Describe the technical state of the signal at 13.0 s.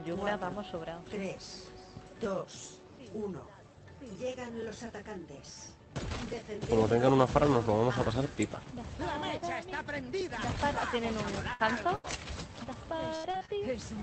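Repeated packet loss (robotic sound) runs from 12.64 to 13.50 s. Five short holes, the longest 78 ms, are patched by stretching the preceding sound. The result is choppy, with pieces missing. On a spectrogram it appears as smeared, repeated frames broken by abrupt seams.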